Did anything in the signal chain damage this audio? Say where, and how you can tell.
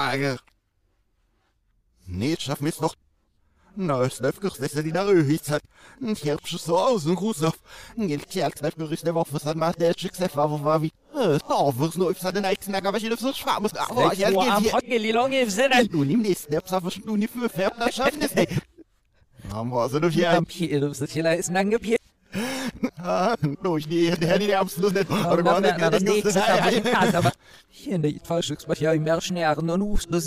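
Yes, there's mains buzz from 11.2 to 13.01 s, an analogue wiring problem. It's a raspy, steady buzz built on 60 Hz, roughly 35 dB under the programme, with harmonics climbing into the kilohertz range. That points to switching spikes from a dimmer, rectifier or unshielded run, landing twice per mains cycle.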